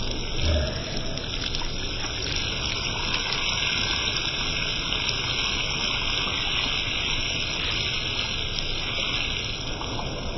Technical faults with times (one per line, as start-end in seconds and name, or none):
0.00-10.37 wrong sample rate